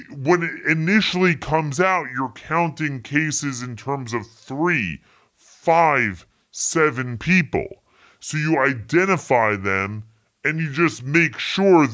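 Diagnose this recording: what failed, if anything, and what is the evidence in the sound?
The fault is a wrong sample rate at the playback stage. The speech runs slow and low for the whole clip. Speed is about 0.73 times normal and pitch drops about 5.5 semitones together. That ratio fits 22 kHz audio played at 16 kHz without conversion.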